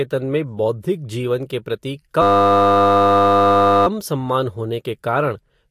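From 2.22 to 3.87 s a steady 100 Hz buzz replaces the speech: a system hang loop, with the hardware replaying one 10 ms buffer while the system froze.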